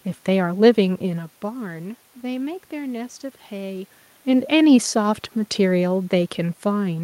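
No technical faults can be heard anywhere in the recording. There is steady background noise from the room, and the talker's level at the microphone shifts around 1 s and again around 4 s, as when someone leans back or comes closer.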